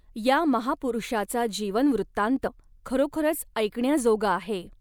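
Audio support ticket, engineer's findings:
Skip at 2.46 s, speech jumps ahead roughly 100 ms. Compressed frames skipped: about four frames dropped or rejected by decoder, consistent with 24 ms frames.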